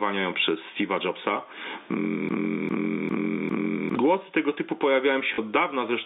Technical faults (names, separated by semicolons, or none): gain pumping; broken-record loop; packet loss with last packet repeated